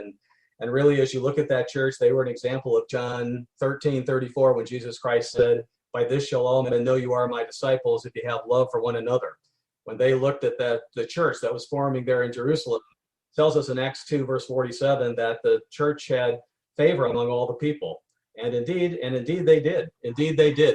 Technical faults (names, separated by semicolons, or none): frames out of order